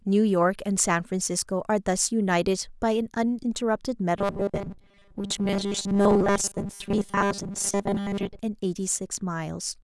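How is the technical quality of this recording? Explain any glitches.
The recording has one clear fault: robotic sound from repeated short buffers, from 4.19 s to 8.39 s. Through that stretch the speech turns into a rigid, metallic buzz fixed at 200 Hz that still loosely follows the words. The likely cause is new audio arriving too seldom, so playback loops the last 5 ms chunk to fill the gaps while the real audio is skipped. This happens for most of the span. On a spectrogram this appears as evenly spaced horizontal lines at multiples of 200 Hz. The waveform shows identical cycles repeating.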